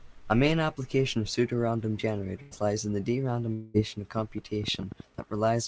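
From 2.42 to 2.54 s the last sound is briefly held and fades. This is a burst of packet loss: about 90 ms went missing and was filled in.

From 3.53 to 3.77 s a longer held, fading sound stands in for the speech, with no silence. This is likely a long network dropout, losing about 210 ms.

From 4.18 to 5.20 s about ten irregular clicks, roughly nine per second, pop above the speech. This train of clicks likely comes from electrical interference.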